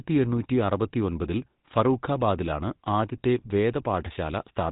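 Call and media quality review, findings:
Buzzy, gravelly roughness on speech, whole clip, plainly audible; nothing above 3.8 kHz. GSM full-rate codec: vocal tract modelled, excitation reduced to regular pulses keeping every third sample, giving the grating buzz. Consistent with a 13 kbps GSM full-rate leg.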